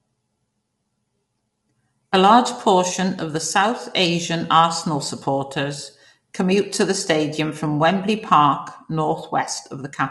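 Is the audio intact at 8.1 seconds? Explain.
No, not really. At 8.1 seconds, like everywhere else in this speech, you hear plainly audible low-delay AAC compression damage, and it runs through the whole clip. The voice sounds rough and grainy, with noise filling the gaps between harmonics, and nothing comes through above about 11.6 kHz. That's most likely AAC-ELD at a lean rate around 32 kbps: its short frames can't separate pitch harmonics cleanly, so the detail smears.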